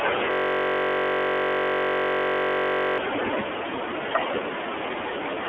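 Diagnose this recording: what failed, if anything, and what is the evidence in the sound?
The whole clip has gone through the iLBC codec, which is a codec-stage issue. The speech is squeezed into roughly 300 Hz to 3.4 kHz and sounds plainly rough and synthetic. Each 30 ms frame is coded on its own, which fits iLBC's 13.33 kbps mode.

The bigger problem is at the driver or buffer level, a system hang loop from 0.31 to 2.98 s. One 21.33 ms slice repeats exactly, over a hundred times, so it comes out as a steady buzz at about 46.9 Hz. That fits a 1024-sample ring buffer cycling while the system was frozen.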